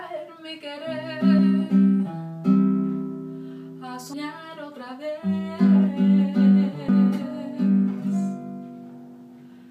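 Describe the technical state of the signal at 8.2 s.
At 8.2 s the signal is intact, with no dropout, distortion, noise burst or other fault audible at that point.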